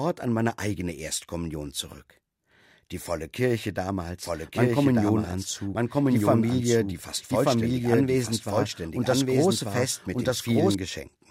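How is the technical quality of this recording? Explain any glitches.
The recording has one clear fault, a doubled audio track from 4.23 s to 10.75 s. The same speech likely reached the mix twice, through a second, slower capture path or an edit holding two copies out of step. A full-band copy trails about one second behind at roughly equal loudness, with no decay or room colour, and it cuts in and out abruptly at those times.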